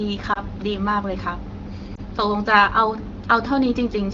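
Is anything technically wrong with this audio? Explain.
Yes. Two brief dips interrupt the speech, at about 0.33 s and 1.95 s. These are lost AMR speech frames: one 20 ms frame failed its checksum each time, so the decoder briefly repeated the previous pitch and vocal tract settings at reduced level.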